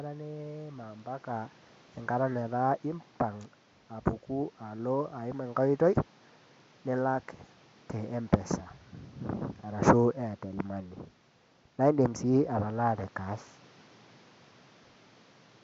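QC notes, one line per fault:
No faults to note for this clip.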